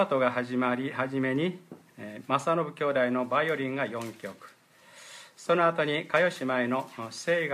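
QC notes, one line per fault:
No faults found.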